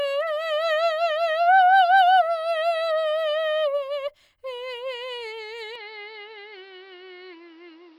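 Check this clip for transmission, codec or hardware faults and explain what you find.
One fault is audible. From 5.76 s to the end, the music abruptly loses everything above 6 kHz and turns dull, with a faint new noise floor far below the signal and no gap or level jump, likely an input switched to a poorer device.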